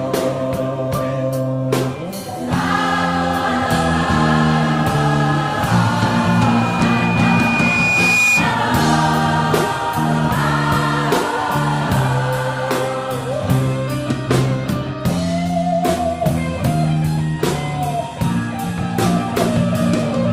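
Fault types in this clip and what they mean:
Loudspeaker feedback squeal: from 6.11 to 8.60 s, a microphone picks up its own loudspeaker and the loop gain passes unity at one frequency, so a 2.4 kHz tone swells over about two seconds until it sits roughly 5 dB above the surrounding sound.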